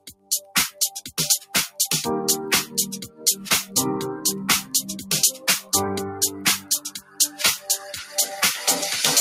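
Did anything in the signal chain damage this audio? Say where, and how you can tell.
Yes. In call processing, a noise suppressor applied to music or sounds stays active throughout, swinging gain by around 10 dB and making sustained sound pump and thin.

Sound cut by the noise suppressor at 0.0–0.55, 0.71–1.15, 1.39–1.79, 3.06–3.25, 5.33–5.72, 6.35–7.39 and 7.59–7.86 s drops by about 8 to 18 dB, with held tones and decays clamped as noise.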